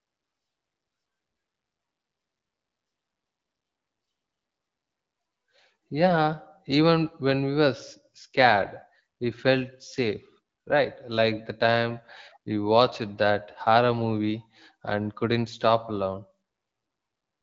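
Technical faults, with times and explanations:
Nothing here counts as a fault: the speech comes through the AMR wideband (HD Voice) codec at 12.65 kbit/s, a rate where that codec keeps speech clear, with only the light coding damage you'd expect from it.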